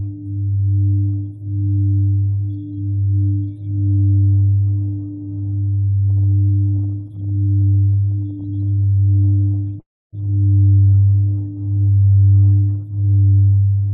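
A recording of everyday sounds, it runs into repeated stalls (stutter) from 5.89 to 9.75 s: 83 brief holds, none longer than 20 ms, stretch the audio by 840 ms, about a fifth of that span. Packets kept arriving late, so the jitter buffer emptied again and again and the receiver extended the last sound each time. The result is a choppy, dragging flutter rather than one clean break. From 9.8 to 10.15 s comes a single 325 ms call audio freeze, which differs from the stutter by being one long hold: the last sound carries on briefly, then drops to about 280 ms of silence before the audio resumes where it stopped. This is likely a held-up burst of packets that drained the jitter buffer. A jitter buffer slow-down between 10.81 and 11.06 s adds 51 ms by repeating tiny pieces, so that stretch plays at 83 % speed with unchanged pitch, sounding drawn out rather than broken up. Finally, a jitter buffer speed-up from 12.41 to 13.89 s trims roughly a fifth of a second to shrink a backlog, pushing playback to 114 % speed at the same pitch, so the sounds come across as hurried, the opposite of the earlier stretching.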